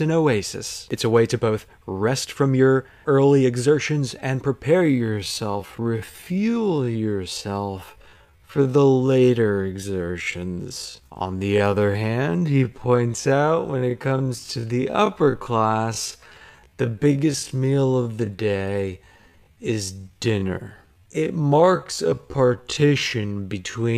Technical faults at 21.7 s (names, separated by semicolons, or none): time-stretched section